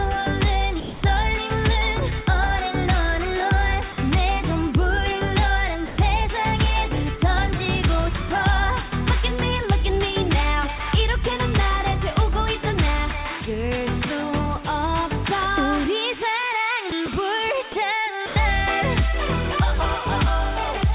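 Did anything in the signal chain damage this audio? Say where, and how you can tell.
Yes. In call processing, the sender's voice detector likely treated passages as background and stopped sending. The sound gives way to steady comfort noise at 0.80–1.02, 3.92–3.98, 5.86–5.98, 10.78–10.80, 16.90–16.92, 17.06–17.08, 17.72–17.74 and 18.26–18.36 s, then resumes.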